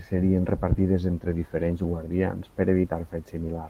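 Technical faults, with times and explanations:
2.81–2.85 s, short concealed packet loss: after "entre diferents guardians per", a 20 ms gap was filled by extending preceding sound, heard as a smear, blurred on spectrograms.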